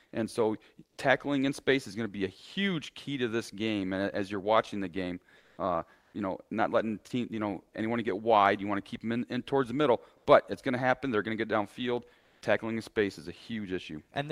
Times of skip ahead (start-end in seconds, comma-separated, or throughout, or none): none